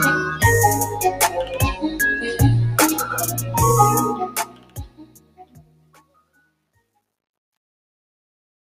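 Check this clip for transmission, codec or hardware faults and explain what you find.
Three faults are present, two of them concentrated in the closing fade-out that runs from about 4 s to 8.75 s.

Noise suppressor applied to music or sounds, throughout: a speech-tuned suppressor treats sustained material as noise, so held sound and tails pump down by around 15 dB.

Truncation distortion on a fade, 4.04 to 8.75 s: the undithered fade lacks enough resolution, which fits roughly 9 bits, so from 4.99 s the tail turns gritty and stepped.

Sound cut by the noise suppressor, 4.28 to 6.4 s: the suppressor mistakes the decaying sound for noise, pulling it down by up to about 12 dB for around two seconds.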